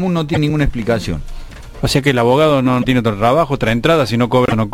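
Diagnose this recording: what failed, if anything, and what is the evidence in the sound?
The fault sits in the codec stage, most likely a broken MP3 bit reservoir after frames were cut from the stream. At 0.33 to 0.37 s, 2.81 to 2.85 s and 4.46 to 4.53 s the sound skips forward and a brief disturbance replaces it, about 43 to 70 ms, or two to three 26.1 ms frames. Frames after each cut decode against borrowed bytes from the wrong frame. A plain dropout or packet-loss concealment would leave a gap or a smoothed repeat, not a jump ahead with frame-length damage.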